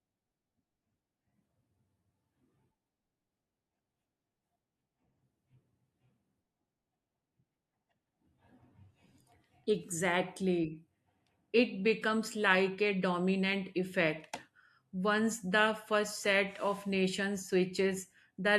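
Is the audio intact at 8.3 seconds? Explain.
Yes, the speech at 8.3 seconds plays through cleanly, with no dropout, click, distortion or other fault audible at that moment.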